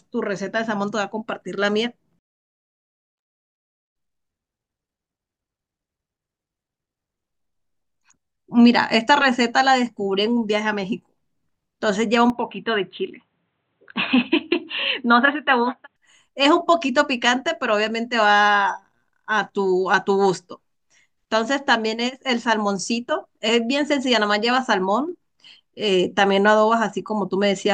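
An input switched to a poorer device runs from 12.30 to 15.96 s in this speech recording. Over that stretch the sound turns dull and boxy, with nothing above 4.1 kHz, then opens back up at the end. There is no silence at either switch, the level barely changes, and a faint new background noise sits far below the speech. The abrupt narrowing and its clean return likely come from the capture moving to a lower-grade microphone or a headset's call profile and then back.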